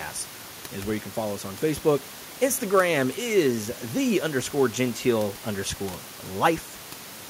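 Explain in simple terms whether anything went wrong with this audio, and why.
Nothing stood out when I listened; the only thing underneath is the ordinary background sound of the room, which sits well below the speech and comes from the space where it was recorded, not from anything going wrong.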